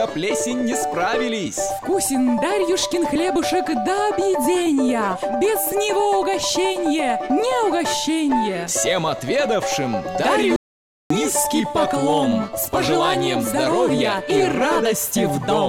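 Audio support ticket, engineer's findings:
Input path lost for about half a second, likely a disconnected device, failed link or stray mute, while the recorder kept writing silence. Audio dropout to silence, 10.56 to 11.10 s. Sound cuts off abruptly mid-flow, then resumes just as abruptly. Gap is silent, no room tone. Roughly 0.54 s of material unrecoverable.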